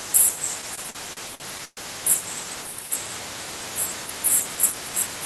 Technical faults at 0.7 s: repeated stalls (stutter)

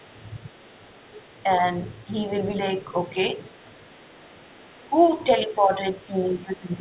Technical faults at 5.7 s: other side's voice leaking through; speech suppressed in double talk

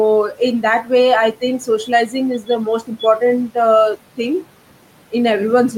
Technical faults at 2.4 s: speech cut by the noise suppressor

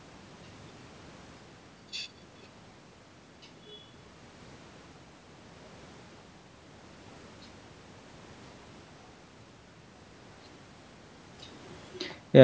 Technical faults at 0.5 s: none

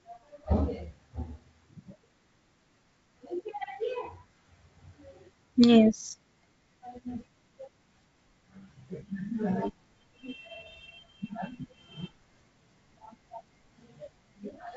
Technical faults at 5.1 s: none

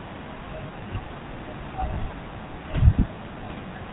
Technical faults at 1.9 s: GSM full-rate codec; lost GSM frames

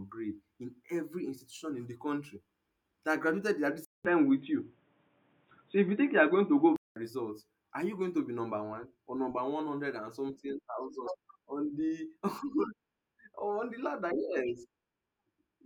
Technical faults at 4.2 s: input switched to a poorer device

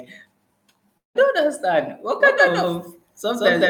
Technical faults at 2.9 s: doubled audio track

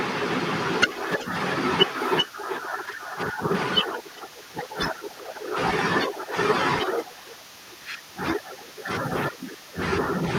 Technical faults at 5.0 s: echo leak

